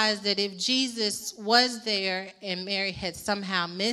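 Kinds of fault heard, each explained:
No technical fault can be heard in this audio. There is nothing to list under any fault heading.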